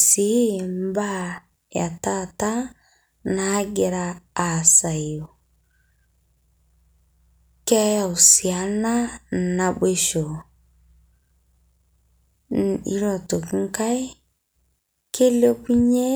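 No technical faults can be heard anywhere in the speech recording: the signal stays continuous throughout.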